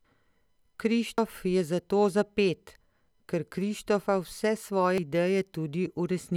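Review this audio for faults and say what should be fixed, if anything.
The speech jumps abruptly at 1.18 s, just before "je zato za", and again at 4.98 s, each time skipping about a tenth of a second with no gap. This is likely audio missing between chunks, lost while the 2-second processing chunks are swapped. To prevent it, buffer chunk boundaries so capture continues during the handover.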